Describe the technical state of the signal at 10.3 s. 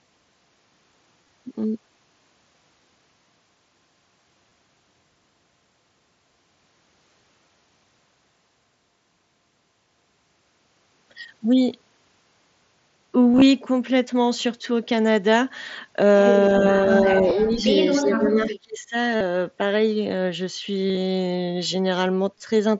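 At 10.3 s the speech is intact, with no fault at that moment, and it comes through the mSBC Bluetooth headset path as expected.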